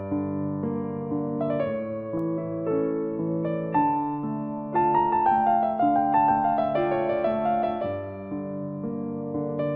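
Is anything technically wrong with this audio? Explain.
Yes. Bit error spikes occur at 2.19 s and 4.84 s. In each, one corrupted bit throws a single sample off and back, peaking at about -32 dBFS and -38 dBFS. Each is a sharp, broadband tick.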